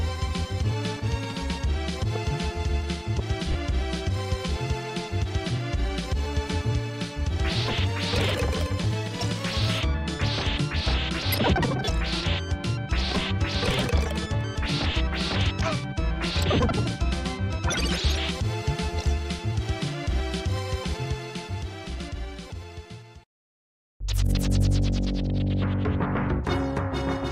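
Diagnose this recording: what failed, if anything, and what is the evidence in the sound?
Lost LE Audio frames on the Bluetooth link at 3.52–3.55 s: the LC3 decoder's concealment repeats the last spectrum with random signs, making a brief 30 ms noisy smear.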